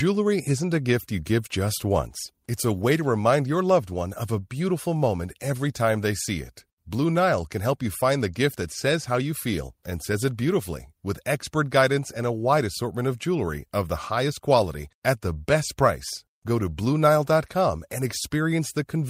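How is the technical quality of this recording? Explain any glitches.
No glitches or technical faults can be heard here.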